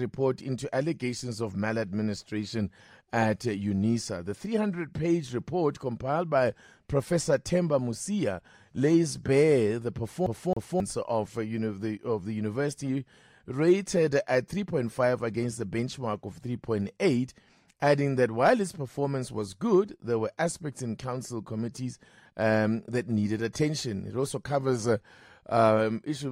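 At 10.26 s the speech catches on a skip, the CD stuck on one turn. The same 270 ms slice of sound plays twice in a row. Each return has a brief mute where the jump happens. The stutter is quick and perfectly even. It lasts until 10.80 s. The cause is a scratch on the disc. It knocks the laser back one track at the same point each revolution, so the player keeps rereading one short stretch.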